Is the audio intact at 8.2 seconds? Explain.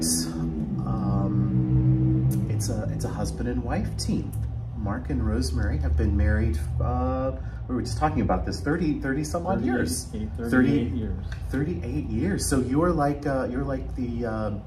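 No. Wrongly applied de-emphasis spans 6.65 to 8.72 s, covering 8.2 s. A treble cut meant to reverse pre-emphasis acted on audio that didn't need it, tilting the highs down to about 8 dB below 1 kHz at 10 kHz, so the sound turns dull and muffled.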